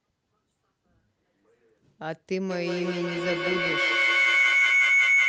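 A speech recording of about 5 s in which feedback howl takes over from 2.5 s to the end. Two devices sharing one room on the same call form a loop from microphone to loudspeaker and back that gains level on each pass. The repeats swell rather than decay, narrowing to a tone around 2 kHz that pulses at roughly 150 ms intervals. It peaks about 9 dB above the speech and is never cut off. The call codec's band limit, consistent with a super-wideband Opus setting near 12 kHz, limits the top end.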